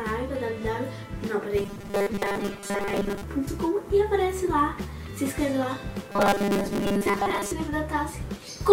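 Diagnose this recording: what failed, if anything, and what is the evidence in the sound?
Robotic sound from repeated short buffers, 1.57 to 3.24 s and 6.12 to 7.51 s: a rigid, metallic 200 Hz buzz covers most of the sound. The driver or buffer stage likely replays a 5 ms block while skipping fresh audio. Unlike dropouts, no silent gaps appear.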